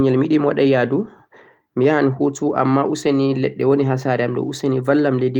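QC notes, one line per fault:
Nothing to flag on this speech clip, as no technical faults turned up anywhere in it.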